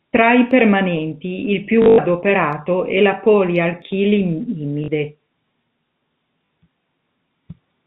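From 1.82 to 1.98 s, packet loss with last packet repeated fills 140 ms of gaps, longest 100 ms, by replaying the last packet. A 50 Hz buzz, fitting 20 ms packets, makes a robotic stutter. A 40 ms repeat at 4.84–4.88 s is brief.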